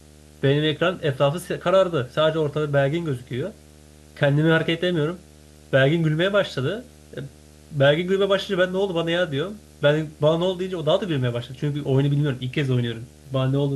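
A display or video cable is coupling interference into the audio path of this speech recording, producing video or display buzz that runs from start to finish. The screen's refresh at a 75 Hz field rate comes through as a steady low buzz at that frequency, topped with a layer of fizzy hash, sitting roughly 25 dB below the speech.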